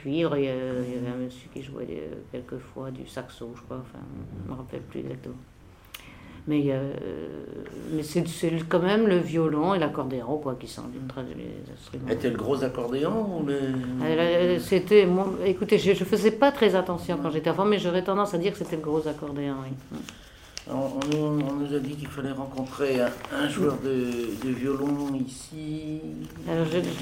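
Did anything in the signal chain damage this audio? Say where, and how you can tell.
Yes. Two tiny jumps at 9.50 s and 10.43 s, each where the sound skips ahead a few milliseconds with no gap. This points at the driver or buffer stage, likely a dropped buffer (overrun): samples overwritten before being read, leaving the surrounding audio spliced together.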